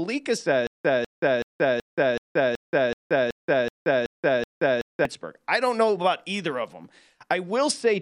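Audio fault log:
0.67–5.05 s, stutter with silent gaps: one 200 ms burst repeats 11 times between 177 ms silences, likely a stalled stream replaying its last fragment.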